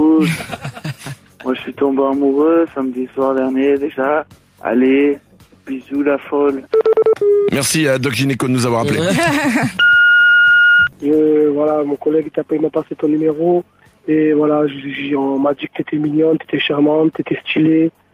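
Throughout, the level rises in quiet stretches and ducks under loud sounds by roughly 5 dB, which is gain pumping, likely from a fast limiter fighting excessive gain. At 3.38 s a single sharp click marks dropped samples, likely a fraction of a millisecond of audio missing, so the waveform jumps abruptly.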